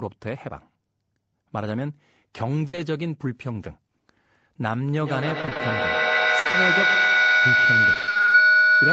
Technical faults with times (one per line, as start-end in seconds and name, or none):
2.67-2.75 burst of packet loss
2.75-2.79 short concealed packet loss
5.02-8.92 feedback howl
5.41-5.61 repeated packet loss (robotic sound)
6.39-6.47 burst of packet loss
6.47-6.55 short concealed packet loss
7.93-8.33 repeated packet loss (robotic sound)